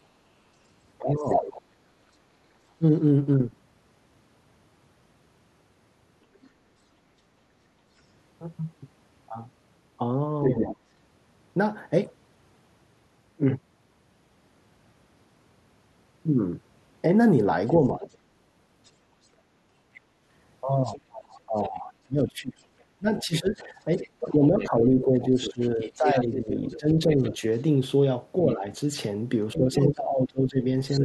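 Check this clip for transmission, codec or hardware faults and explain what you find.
Two echo-canceller faults affect this speech, both from a loudspeaker and microphone sharing one device.

Speech suppressed in double talk occurs at 0.99–2.84 s, 10.61–10.81 s, 17.93–18.04 s and 21.08–30.65 s. The talker dips by up to about 25 dB, likely because the canceller ducked everything while both sides spoke.

The other side's voice leaks through at 1.19–1.62 s, 6.42–6.50 s, 10.44–10.73 s and 18.03–31.01 s. The residual echo is likely left over from the loudspeaker, ranging from faint to nearly as loud as the talker.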